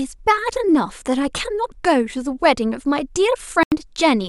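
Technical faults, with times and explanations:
3.63 to 3.72 s, Bluetooth stall: the speech drops into about 87 ms of dead silence and then carries on. That abrupt gap is most likely the headphones' buffer running dry while interference held back packets, so playback simply froze until the resent data arrived.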